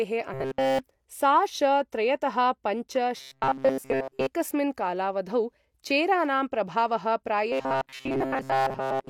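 From 0.34 to 0.79 s, 3.17 to 4.27 s and 7.52 s to the end, speech turns into a rigid metallic buzz at 133 Hz. This is robotic sound from repeated short buffers, likely about 7.5 ms loops standing in for skipped audio. The buzz's fixed rate ignores the original pitch.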